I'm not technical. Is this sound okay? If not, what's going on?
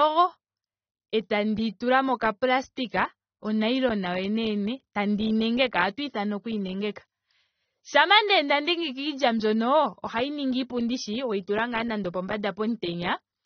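No. Throughout the speech, the sound is dull, with nothing above about 6.3 kHz, and plainly smeared with a warbling, fizzy edge on hissy sounds. That points to AAC compression, likely at a low data rate. A plain treble cut would sound muffled but not watery like this.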